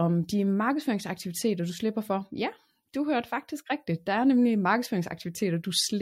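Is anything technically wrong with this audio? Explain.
No, nothing technically wrong turns up anywhere in the recording.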